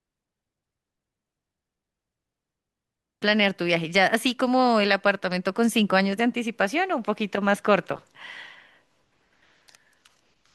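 At about 3.21 s the speech jumps abruptly forward with a small blip; that's likely a stream segment skipped, where one chunk failed to load and playback carried on.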